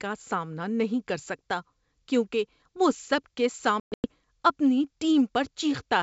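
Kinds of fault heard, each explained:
Packet loss on an ADPCM call: from 3.80 to 4.06 s, just after "کیونکہ وہ سب کے", about 220 ms drops out in hard-edged silent gaps scattered over 240 ms, the longest 120 ms. The decoder's predictor and step size lose track of the sender, so the sound resumes slightly distorted before settling.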